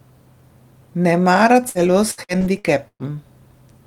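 From 1.69 to 3.03 s, the speech suffers repeated packet loss (robotic sound): packets arrive late or not at all, over and over, and each hole is covered by extending the last received sound. Five gaps fall within this stretch, the longest about 117 ms, and roughly a quarter of the span is patched this way. The result is choppy speech with small pieces missing, as held fragments repeatedly stand in for lost audio.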